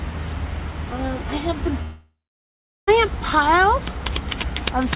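From 1.82 s to 2.89 s there is a long network dropout, likely from packets that never arrived. The receiver extends the last sound as a fading buzz or hiss, which decays into about 0.75 s of silence. The audio resumes with that stretch missing, band-limited to 4 kHz throughout by the G.711 call path.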